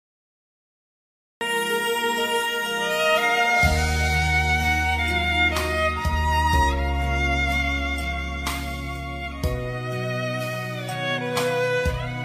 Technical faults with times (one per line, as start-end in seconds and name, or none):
0.00-1.41 cut-off start